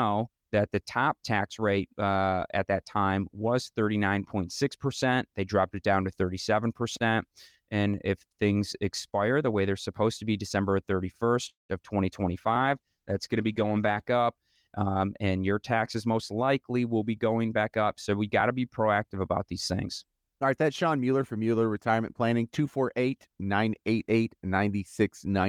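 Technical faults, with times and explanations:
11.49 to 11.71 s: call audio freeze. The sound stretches into a fading buzz, then about 160 ms of silence, likely from delayed packets; nothing is lost, everything shifts 196 ms later.
12.27 to 14.09 s: call bitrate drop. The encoder falls from 32 to 15 kbps for about 1.75 s. Speech turns coarse and muffled as the highs thin out.
14.83 to 16.33 s: jitter buffer speed-up. Speech runs about 12% fast at unchanged pitch, sounding hurried, as roughly 200 ms of short pieces are cut before "will be going back".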